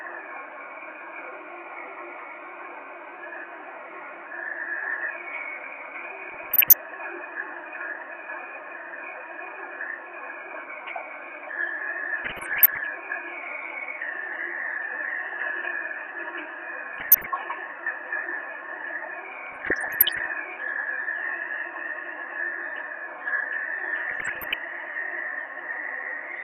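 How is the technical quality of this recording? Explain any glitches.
The recording suffers from repeated DAB burbling in five bursts: 6.29–6.77 s, 12.25–12.87 s, 16.93–17.27 s, 19.46–20.26 s and 24.09–24.54 s. Weak reception let bit errors, somewhere under one percent, slip past error correction into the MP2 data, corrupting samples into short noise blips in single sub-bands and corrupting scale factors so individual sub-bands leap in level for up to a frame. Over the sounds this becomes a burbling of blips and level jumps lasting roughly a third to most of a second each time.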